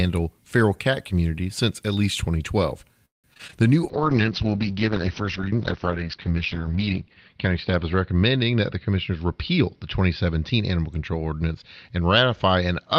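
From 3.05 to 3.64 s the speech breaks up with repeated packet loss. Packets kept going missing, and each hole was filled by stretching the last sound. About half of that span is concealed, and the longest gap runs 184 ms, so the audio turns choppy.

At 3.91 s a call bitrate drop begins and lasts to the end of the clip. The sound fits the encoder being pushed from around 32 kbps down to about 7 kbps. It stays at its worst for about 2.9 s. The audio becomes coarse and watery, and the top end is cut from about 20 kHz to 6 kHz, which dulls the speech.

Between 8.51 and 9.11 s a jitter buffer speed-up is audible. The receiver had built up excess delay and trimmed short pitch-period chunks, removing a few tens of milliseconds in total. The speech plays about 5% faster at an unchanged pitch and sounds slightly hurried.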